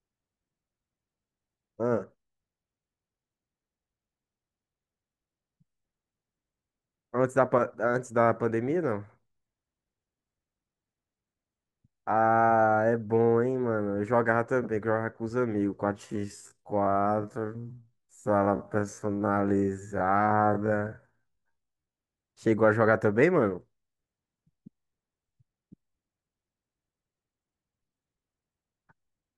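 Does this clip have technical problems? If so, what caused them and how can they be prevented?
Yes. From 16.04 s to 22.00 s the speech suddenly drags to roughly half its normal pace, about 0.51 times speed, yet the pitch stays where it was. This is a time-stretched section, likely produced by software that lengthened the audio to fill a slot by repeating short fragments rather than lowering the pitch. To prevent it, edit or re-record the material to fit the available length instead of stretching it.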